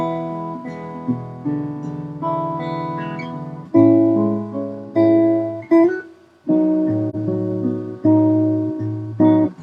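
AAC frame loss with muting occurs at 7.09 to 7.15 s. For roughly 43 ms the sound drops into a brief gap, which fits a single missing AAC frame. The decoder had no data for that frame and filled its spectrum with zeros. Because each frame overlaps its neighbours, the audio fades down into the gap and back up out of it rather than cutting abruptly. The result is a brief, soft-edged dip.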